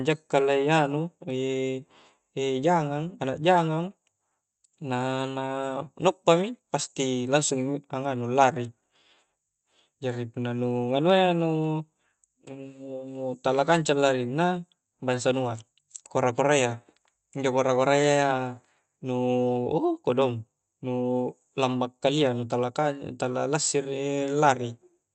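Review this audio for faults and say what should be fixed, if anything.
Nothing here needs fixing: the speech carries the ordinary character of a WebRTC call path, with Opus coding that fits a rate near 48 kbps and an audio band that tops out around 8 kHz.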